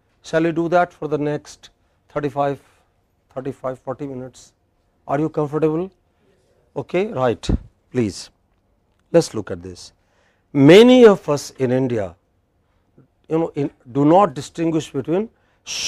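At 14.25 to 14.29 s there is damaged data in a compressed stream. For about 40 ms the bytes are wrong, so the decoder misreads those frames and loses sync. It then hunts for the next valid frame header. The result is a brief chirp, squawk, click or short hole.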